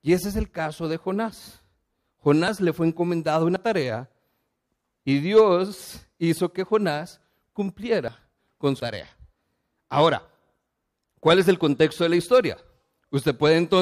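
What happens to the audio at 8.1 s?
At 8.08 s the speech jumps abruptly, skipping roughly a tenth of a second without any gap. This is likely a dropped buffer (overrun), where unread samples were overwritten and the surrounding audio spliced together. The waveform shows a sudden discontinuity and the spectrogram a thin vertical broadband line.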